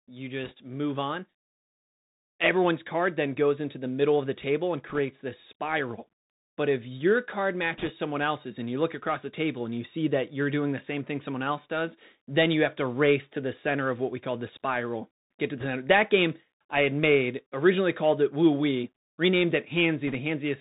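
A speech recording carried over a Bluetooth CVSD headset codec, whose damage is plainly audible throughout. The one-bit delta modulation at a rate that fits a 64 kbps CVSD stream only signals up or down with an adapting step, so the band stops at about 4 kHz. Loud, bright sounds outrun the step and distort, sibilants turn scratchy, and a granular hiss sits under the speech. Five short bursts of bit errors on a Bluetooth voice link add a rushing crackle: 0.44–0.52 s, just before "move on"; 4.89–4.99 s, between "of the table and" and "this spiral"; 7.78–7.91 s; 15.60–15.66 s, just after "to the"; and 20.07–20.15 s. Each flipped bit in CVSD carries only one small step, and its effect decays, so the bursts give no sharp clicks, only a brief noisy roughness. It is heavier at 7.78 s and 15.60 s, where the error rate is around 2 percent rather than around 1 percent.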